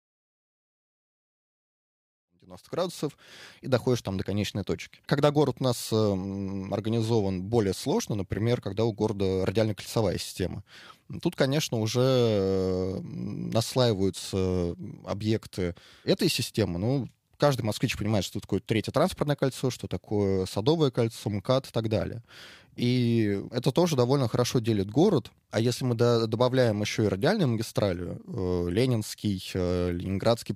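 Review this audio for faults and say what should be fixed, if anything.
Nothing here needs fixing; no faults were found.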